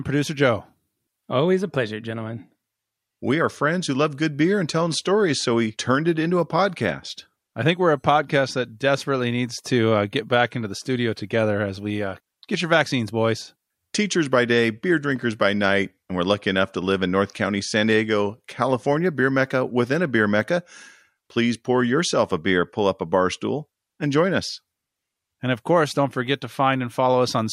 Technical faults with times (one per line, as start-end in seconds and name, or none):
none